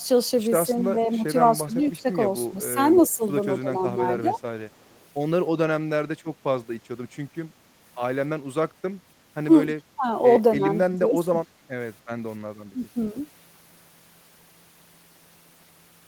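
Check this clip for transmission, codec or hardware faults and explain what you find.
The clip has two faults from acoustic echo cancellation on the call.

Speech suppressed in double talk, from 0.74 to 4.36 s, 9.67 to 11.69 s and 12.72 to 12.97 s. When both sides spoke together, the echo canceller likely mistook this talker for loudspeaker echo and attenuated it. The speech dips in pieces by up to about 15, 20 and 10 dB respectively.

Echo leak at 1.98 to 2.02 s, 2.96 to 3.08 s and 4.71 to 5.05 s. The far end's canceller likely failed to remove all of the loudspeaker sound its microphone picked up and sent it back. This returns a copy of the speech 290 ms late, at about 40 dB below it, then about 15 dB, then about 40 dB.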